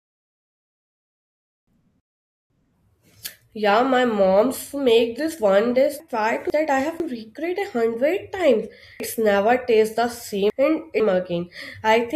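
Speech with chunks out of order three times. At 1.5–2.5 s and 6.0–7.0 s (between "make this one dish" and "recreate a hundred times"), one 500 ms block plays a block late. At 9.0–11.0 s, after "recreate a hundred times", a block lands three places late. Each jumbled stretch has three hard joins. A spectrogram shows sharp vertical edges where the harmonic tracks break off, and the waveform shows sudden steps at each seam.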